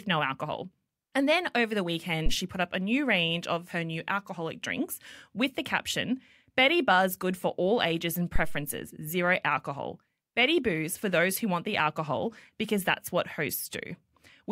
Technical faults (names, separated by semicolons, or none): phantom power thump